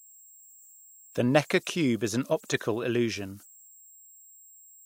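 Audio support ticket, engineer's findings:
Converter idle tones, throughout: whistle around 7 kHz in pauses, grit under quiet speech, about 28 dB down. Undithered delta-sigma converter cycling bit patterns at low input.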